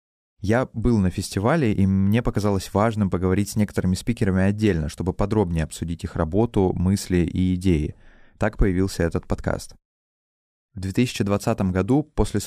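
No technical faults can be heard in this speech at any point, so there is nothing to describe in time order.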